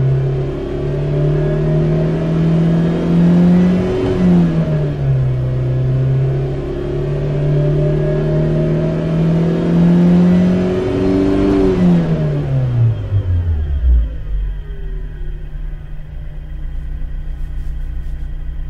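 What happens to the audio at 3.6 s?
Nothing goes wrong at 3.6 s; the audio plays through that moment intact, with no dropout, click or other fault.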